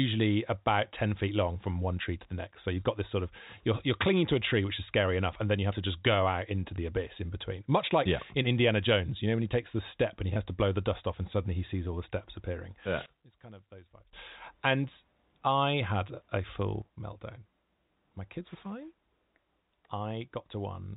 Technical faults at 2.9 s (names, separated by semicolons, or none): none